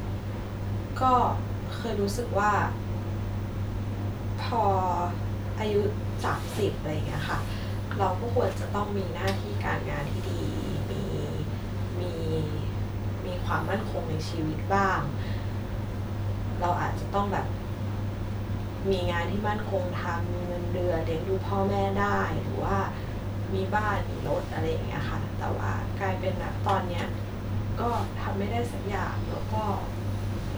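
A recording of speech, with no technical fault to be heard anywhere in it. Nothing in the signal calls for a time or a cause to be pointed out.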